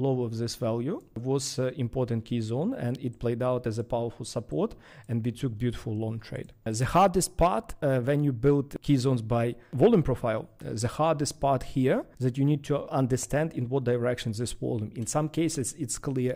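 At 2.95 s an electrical switching spike adds one quiet, sharp snap, likely a nearby switch arcing, sitting on top of the audio rather than interrupting it like a dropout.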